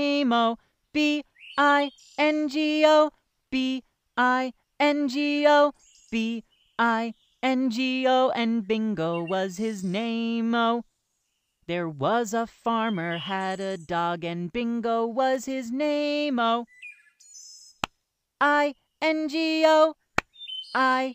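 At 15.34 s there's a sharp snap sitting on top of the sound, over in a flash, peaking at only about -30 dBFS, so it's a small tick rather than a loud crack. It sounds like an electrical switching spike: a nearby switch, motor or bit of static discharge most likely threw a brief arc, and the audio line picked that burst up as interference riding over whatever was being recorded.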